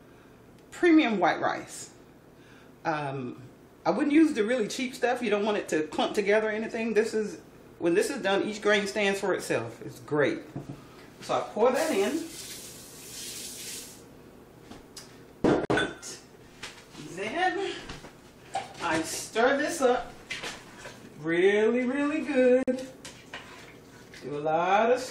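At 15.65 s and again at 22.63 s, a gap at a join of encoded pieces drops about 50 ms of silence: untrimmed encoder delay and end padding between separately encoded segments, with smeared edges before the sound resumes.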